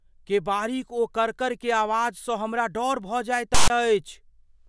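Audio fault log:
3.55–3.70 s, file tags played as audio: a hard-edged burst of loud rasping static, lopsided to one side, dropping abruptly into dead silence. A block of text tags with zero padding was decoded as samples: the characters produce the offset rasp, the padding the silence.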